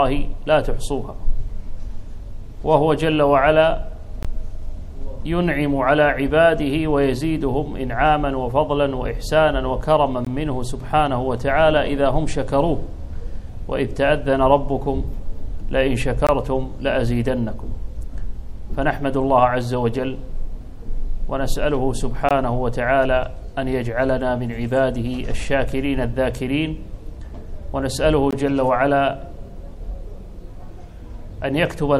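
Gaps between chunks open at 4.23–4.25, 10.25–10.27, 16.27–16.29, 22.29–22.31 and 28.31–28.33 s: 20 ms silent holes, each after the first following a 6.0 s stretch of audio. Unlike packet dropouts, nothing is lost; the sound resumes where it stopped, and the holes recur at a fixed interval.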